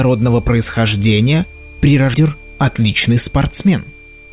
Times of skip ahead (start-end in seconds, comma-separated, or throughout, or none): 2.14-2.16